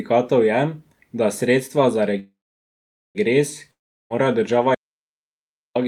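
From 2.19 s to 3.18 s there is a call audio freeze, likely from packets being held up in transit until the jitter buffer ran empty. The receiver filled the wait by stretching the last sound into a fading buzz, which gives way to silence for about 0.82 s of the roughly 0.96 s gap. When audio resumes it picks up exactly where it stopped. Nothing is lost, but everything after lands about 0.96 s later.

At 3.71 s a long network dropout begins and lasts until 4.25 s, likely because a run of packets never reached the receiver at all. Again the last sound is carried on as a decaying hiss, and then about 0.38 s of near silence takes over. This time the speech comes back further along than where it broke off, because roughly 0.4 s of it was never played and is simply absent.

From 4.75 s to 5.75 s comes an audio dropout to silence, likely a lost input such as a disconnected device or an accidental mute while recording carried on writing silence. 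The speech cuts off abruptly in mid-flow, with no fading tail, and the gap of about 1.0 s is completely dead, with even the room tone gone. Whatever was said during that second is missing, and the sound returns just as abruptly.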